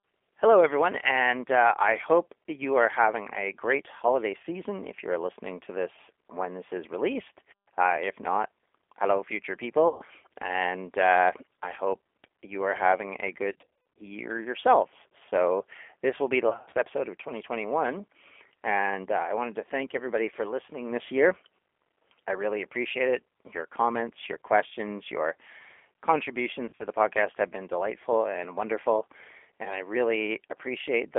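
G.729 coding runs through the whole speech clip, with plainly audible damage. The band is held to about 300 Hz to 3.4 kHz, and the roughness fits G.729A at 8 kbit/s. The decoder rebuilds each 10 ms frame from a vocal tract filter, a pitch predictor and a handful of pulses rather than the actual waveform. That leaves the voice dull, slightly rough and synthetic-sounding, with nothing above the telephone band.

VoIP packet loss concealed by the speech codec strikes four times. At 9.88 to 10.04 s about 120 ms of audio is missing. From 13.52 to 14.01 s, 320 ms is lost in runs of up to 50 ms scattered across 460 ms. From 16.49 to 16.77 s, 190 ms is lost in runs of up to 60 ms. From 26.66 to 26.86 s, 110 ms is lost in runs of up to 50 ms. At each gap the decoder stretches its last pitch and filter into a buzzy tone or coloured noise that fades. Because every frame builds on the previous one, the voice stays weak or distorted briefly after packets resume.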